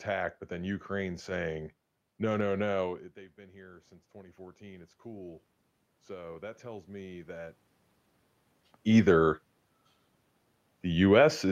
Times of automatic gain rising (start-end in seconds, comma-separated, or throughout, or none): 3.14-5.49, 6.07-7.57